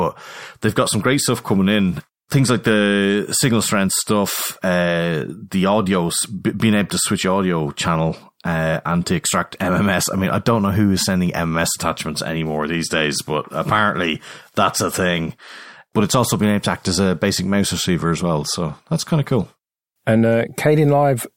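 Nothing technically wrong turns up anywhere in this speech recording, so there's happily no fault here to point at or explain.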